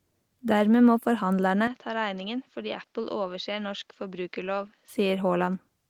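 At 1.67 s, just after "må forhandlerne", the speech turns dull and drops roughly 10 dB, with no gap. Nothing remains above 7.1 kHz. A faint new hiss appears. The input likely switched to a poorer device. Full tone returns at 4.88 s.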